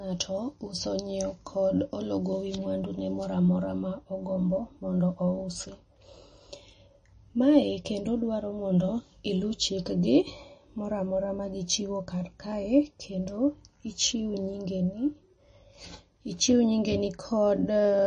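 Throughout the speech, the sound is watery and swirly, s sounds chirp metallically, and nothing is heard above 9.4 kHz. This is likely MP3 compression at a low bitrate, perhaps 32 kbps, where the encoder cuts the treble and drops weak frequency lines.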